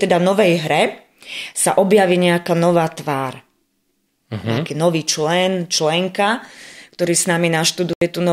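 At 7.93 s the speech cuts out abruptly for about 81 ms and resumes at 8.02 s, having moved on as though it kept playing. This is a Bluetooth dropout, likely from a few radio packets arriving too late. A spectrogram shows a clean vertical gap; the waveform drops flat between sharp edges.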